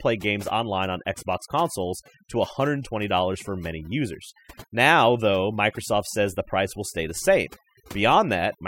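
A speech recording suffers from overdone noise removal throughout. Overly strong noise reduction has gated frequency bands, leaving near-silent gaps with twinkling specks.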